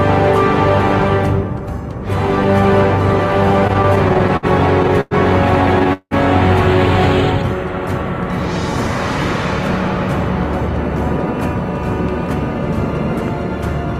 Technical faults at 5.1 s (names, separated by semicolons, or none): call audio freeze